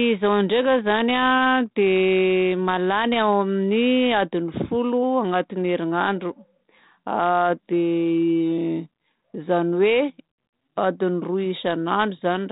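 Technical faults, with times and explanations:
No technical faults are present in the speech. It passes through a G.726 ADPCM path at 32 kbit/s, which confines the audio to below 4 kHz and adds only a faint grain that rises and falls with the level.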